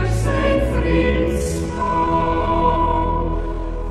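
At 1.0 s the pace drops abruptly to about 0.58 times normal speed and stays there until the end at 3.90 s, a time-stretched section. The pitch does not fall with the tempo, which separates this from a tape or playback slowdown, where everything would sag lower. Software likely lengthened the audio by repeating short slices to preserve pitch, and those repeats leave the slowed sound dragging.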